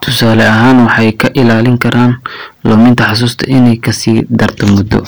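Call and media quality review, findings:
Hard clipping, whole clip: gain stage driven about 12 dB past full scale, so around a tenth of samples hit the ceiling and are cut flat. Flat-topped peaks add high harmonics; every loud speech syllable carries a harsh fuzz.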